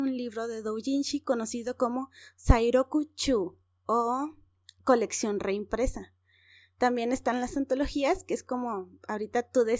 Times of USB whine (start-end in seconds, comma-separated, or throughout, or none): none